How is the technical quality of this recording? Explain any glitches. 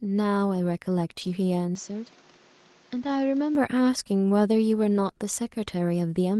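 The speech has two kinds of fault, with three events in total.

From 1.21 to 1.31 s and again from 2.95 to 3.17 s, the sound turns briefly rough and grainy, but it never drops out. This is a lost packet rebuilt from error correction. The first stretch lasts 60 ms, which fits three lost packets. The second lasts 120 ms, which fits six. Each later packet carried a low-bitrate backup of the missing audio, and the decoder played those coarser copies to fill the holes.

From 1.75 to 3.55 s, the sound goes duller and boxier, drops about 5 dB in level, and picks up a new noise floor roughly 30 dB below the signal. Nothing reaches above 7.6 kHz during this stretch. There is no silence at either change. The likely cause is that the input switched to a poorer device. A narrower-band microphone or headset path would cut the top end and bring its own tone and hiss. The second rebuilt stretch falls inside this span.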